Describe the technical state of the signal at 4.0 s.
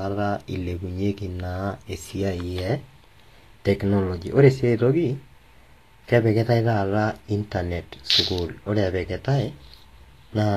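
At 4.0 s, as throughout, the speech is hissy and grainy with nothing above 14.2 kHz: likely Vorbis compression near 35 kbps, its coarsely quantised treble turned to noise.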